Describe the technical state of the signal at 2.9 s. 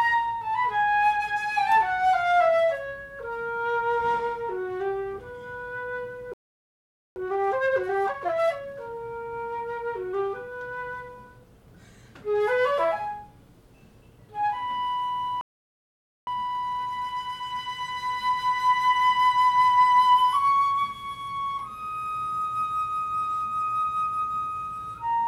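At 2.9 s the audio is intact, with no audible fault at that moment.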